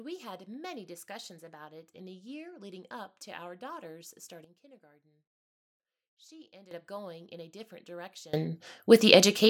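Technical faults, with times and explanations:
4.44–6.71 s, sudden gain jump: right after "up to our daughters" the level drops by about 12 dB in one step and stays there until it snaps back before "up going in a". The background noise falls and returns together with the speech, and neither edge is ramped. That sets it apart from a fade or a compressor pulling the level down. The likely cause is a gain setting applied without smoothing.
8.34 s to the end, sudden gain jump: after "going in a different" the level leaps up by about 24 dB at once and holds to the close. Speech and noise floor rise together with no gradual attack, unlike automatic gain control or a swell in loudness from the talker. The likely cause is a bit shift or a setting change applied instantly.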